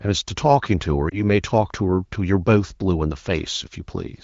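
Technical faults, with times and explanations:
1.09–1.16 s, lost AMR speech frames: a brief dip or warble in the speech, then a moment of weak, rough sound as it recovers. This fits one corrupted 20 ms frame, which the wideband decoder bridged by repeating the previous pitch and vocal tract settings at lowered gain.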